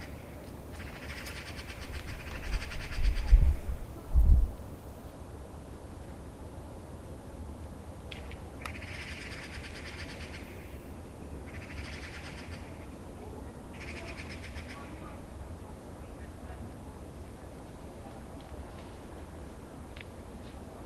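No technical faults are audible.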